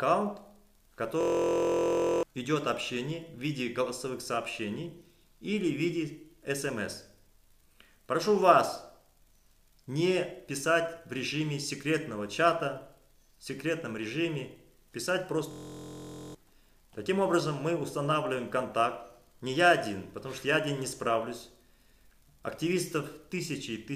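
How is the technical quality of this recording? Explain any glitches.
Two system hang loops mar the recording, at 1.21 to 2.23 s and 15.51 to 16.35 s. A frozen driver left the hardware replaying one 23.2 ms fragment, consistent with a 1024-sample buffer. Each stall produces a steady 43 Hz buzz and drops roughly one second and 0.7 s of audio.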